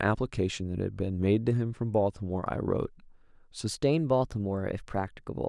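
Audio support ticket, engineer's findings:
Wrong sample rate from 3.68 s to the end at 5.49 s. Speech jumps about 1.5 semitones sharp and runs 1.09x fast, pitch and pace shifting together. Fits 22 kHz material going out at 24 kHz with no resampling. Check the playback clock or a missing rate converter in the output path. The sudden switch mid-clip is your clue. Probably a stream or device reconfigure right around 3.7 s.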